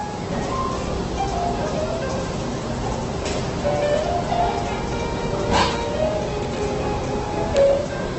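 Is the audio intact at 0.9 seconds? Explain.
No. At 0.9 s, as across the whole clip, the sound is grainy, rough and noisy, with nothing above 8.2 kHz. This is likely heavy Opus compression in music mode, at a rate that sounds near 12 kbps. Starved of bits, the encoder fills bands with folded or noise content. A spectrogram shows a hard ceiling at 8.2 kHz and speckled, smeared texture below it.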